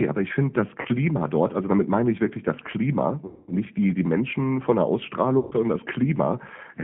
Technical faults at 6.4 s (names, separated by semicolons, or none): G.729 codec